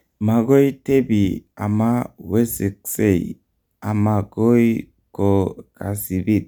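No technical faults are audible.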